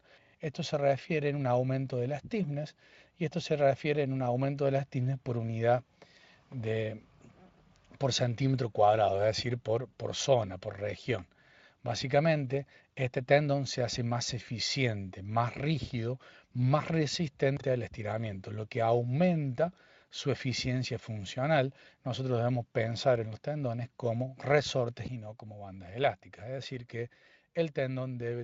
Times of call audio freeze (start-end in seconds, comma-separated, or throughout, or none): none